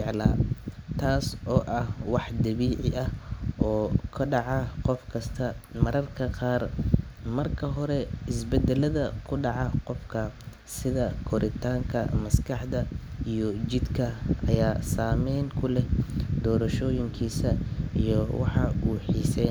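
No technical faults can be heard anywhere in this speech recording. There is nothing to place on the timeline.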